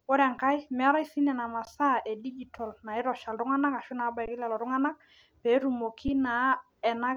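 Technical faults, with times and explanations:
0.38, 1.65, 2.58, 4.26 and 6.08 s, underrun with held sample: the output buffer briefly ran dry and the converter froze on its last value for 3.2 to 17.4 ms, the 5.8 ms gaps fitting a 256-sample buffer. The speech pauses then resumes where it stopped. The waveform shows short flat plateaus, and the spectrogram shows thin empty columns with only faint edges.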